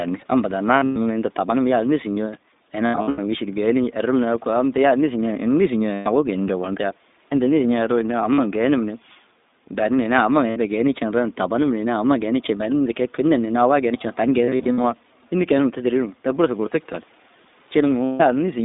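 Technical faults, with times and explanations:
Throughout, iLBC codec: the speech sounds narrow, slightly rough and synthetic, with nothing below about 200 Hz or above about 3.7 kHz. The iLBC coder at 15.2 kbps codes each 20 ms frame on its own, and its damage is plainly audible.
0.80–0.97 s, 2.86–3.19 s, 5.94–6.08 s, 8.34–8.40 s, 10.50–10.58 s, 14.44–14.85 s and 18.04–18.22 s, lost iLBC frames: the speech turns into a held, buzzy or breathy vowel, then snaps back almost at once. Packets went missing, from 40 to 240 ms in all, and the decoder repeated the last pitch cycle mixed with noise. At 0.80, 2.86 and 14.44 s the losses come scattered, in runs of up to about 100 ms.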